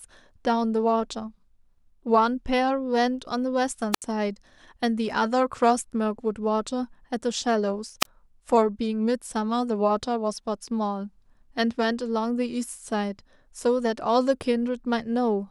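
Two wireless microphone squelch dropouts break the speech, at 3.92 to 4.02 s and at 8.00 to 8.06 s. Each time the analogue FM link fades, hiss rises briefly, and the receiver's squelch mutes the output. This leaves holes of near silence of about 73 ms and 26 ms before the speech returns.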